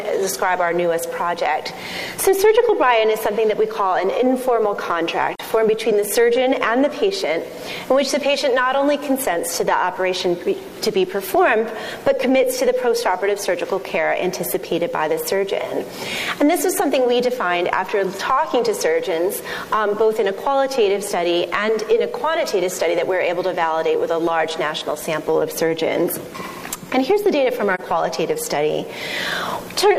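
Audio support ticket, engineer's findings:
AAC frame loss with muting, two brief dips at 5.35–5.40 s and 27.74–27.80 s. Sound fades out and back in over roughly 43 ms each, which fits one lost frame. Decoder zeroes the lost spectrum and overlapping windows smooth the edges. Soft-edged, unlike a hard sample dropout or buffer underrun, which cuts abruptly and snaps.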